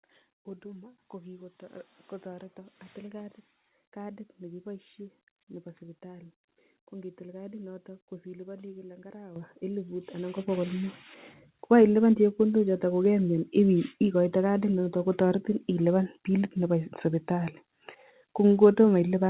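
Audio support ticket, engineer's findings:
Microphone volume stepped up, three times: 9.36 s right after "kadinoto ko silipani kila" (about 10 dB), 10.38 s (about 7 dB), 13.05 s after "chepkondochoto ko" (about 1 dB). Speech and room noise jump together, so it's the input gain, not the talker. Probably auto gain control in the call client bumping the device volume. Narrowband sound with nothing above 4 kHz is the telephone-style codec, fits G.711.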